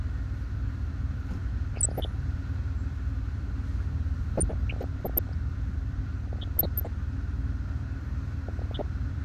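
DAB burbling appears from 1.74 to 2.11 s, 4.36 to 5.32 s, 6.27 to 6.87 s and 8.48 to 8.82 s. Weak reception let bit errors, on the order of half a percent, slip past error correction into the MP2 data. Corrupted samples put short blips of noise into single sub-bands, and corrupted scale factors make sub-bands jump in level for up to a frame. The longest stretch is the one near 4.4 s.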